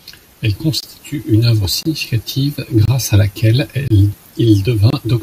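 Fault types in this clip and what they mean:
Gap between chunks: The speech arrives in pieces about 1 second long, and a short silence sits between each piece. Nothing is cut out. The sound just stops and restarts at each join. Here there are five holes, each about 25 ms long, at 0.80, 1.83, 2.85, 3.88 and 4.90 s. They repeat at a steady spacing of a little over a second. This gives the speech a regular stutter.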